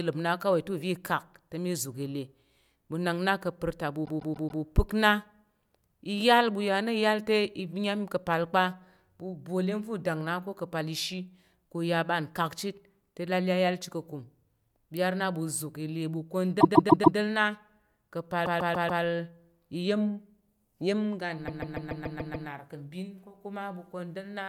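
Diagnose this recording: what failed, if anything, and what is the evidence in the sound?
Repeated frames, at the codec or storage stage: just after "kapar ta ɓu" the speech stutters from 4.05 to 4.62 s, then again at 16.60–17.17, 18.45–19.02 and 21.47–22.48 s. A 144 ms block replays four extra times (seven in the last), lengthening the audio.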